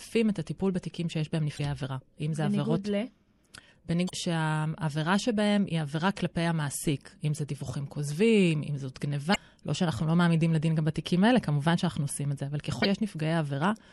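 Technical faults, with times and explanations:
Throughout: MP3 compression, likely at a low bitrate such as 64 kbps. The speech sounds watery and swirly. Weak detail flickers in and out between frames. S sounds carry metallic chirps. Consonant attacks smear.
1.56 to 1.60 s, 4.07 to 4.11 s, 9.32 to 9.36 s, 12.82 to 12.86 s: damaged data in a compressed stream. Each brief blip, about 45 ms long, is a stretch of corrupted frames. The decoder misreads them, loses sync and hunts for the next frame header. That produces a short glitch.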